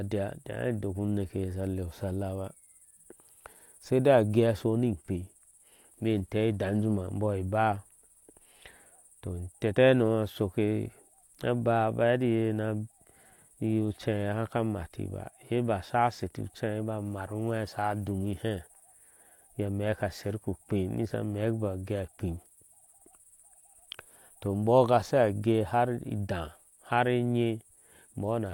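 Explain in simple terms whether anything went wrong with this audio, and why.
Nothing stood out on listening to the speech; no problems with the recording could be heard anywhere.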